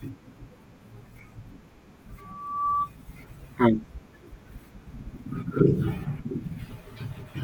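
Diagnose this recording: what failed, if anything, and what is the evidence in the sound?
A single tone near 1.2 kHz swells out of the speech at 2.18 s, grows over roughly half a second to about 5 dB above the speech, and stops at 2.91 s. This is loudspeaker feedback squeal in the analogue, acoustic stage: the microphone picked up its own loudspeaker, and at 1.2 kHz the loop gain exceeded one.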